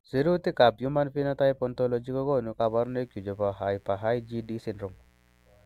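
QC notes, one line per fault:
2.61–5.65 s: mains buzz. A steady, raspy buzz enters at 2.61 s and runs to the end, sitting well below the speech. Sharp switching spikes from the 60 Hz supply leak in twice per cycle. Their harmonics stack up into the kilohertz range.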